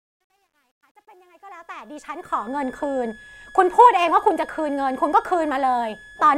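Truncation distortion on a fade runs from 0.0 to 2.62 s in this speech clip. It is worst from 0.0 to 1.67 s. The gain stage behind the fade keeps too few bits and adds no dither, which fits roughly 11-bit resolution. At the lowest levels the waveform collapses into a handful of square steps, so the quiet start sounds gritty before the level rises. A switching supply whistle sits under the whole clip as a high tone wandering between 1.65 and 1.73 kHz, roughly 25 dB below the speech. A switching power supply running in an audible burst mode, or beating against another supply, produces exactly this kind of thin whistle. Its pitch shifts as the load on the supply changes.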